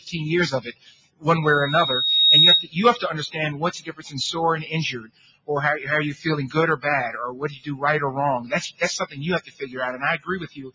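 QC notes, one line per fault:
Throughout: noise suppressor applied to music or sounds. A speech-tuned suppressor stays engaged and treats sustained tones, ambience and reverb as noise, so gain swings by around 10 dB. Attacks pass while held material and tails sink, giving audible pumping and thinning.
0.65–1.26 s, 3.8–4.12 s, 4.99–5.5 s, 7.45–7.68 s, 9.41–9.76 s, 10.18–10.74 s: sound cut by the noise suppressor. In each stretch the suppressor misjudges steady or decaying sound as noise and pulls it down harder than its surroundings. The deepest drops range from about 10 dB to about 20 dB.
1.42–2.69 s: loudspeaker feedback squeal. A 3.8 kHz tone swells over roughly a second to about 10 dB above the programme. The microphone is hearing the loudspeaker it feeds, and loop gain exceeds unity at that frequency, so the tone sustains itself.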